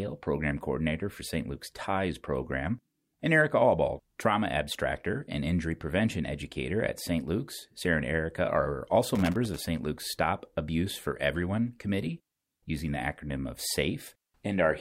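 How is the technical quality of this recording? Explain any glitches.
The recording has one clear glitch in the speech. From 9.15 to 9.59 s, just after "are also", an irregular burst of scratchy crackle cuts through for under half a second. That is loose connector crackle: a worn or dirty contact repeatedly breaking and remaking the connection, chopping the signal into fragments and adding sharp pops wherever a DC offset jumps.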